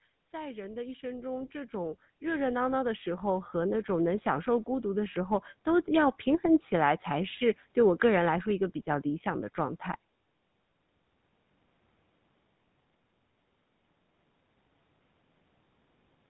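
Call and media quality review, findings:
GSM full-rate codec, throughout: buzzy, gravelly voice, consistent with 13 kbps full rate; spectrogram empty above 4 kHz, coarse pulse-driven excitation smearing harmonics.

Automatic gain rising, 0.31 to 5.43 s: voice and background swell together by about 17 dB; waveform envelope ramps steadily upward as the AGC raises gain.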